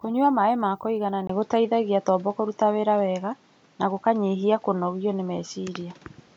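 Input switched to a poorer device at 1.27 s in this speech clip, right after "maĩ ma kũigana", lasting to the end: a 20 ms gap, then nothing above 7.6 kHz, a level shift of about 5 dB and a new noise floor roughly 35 dB down, likely from a changed microphone.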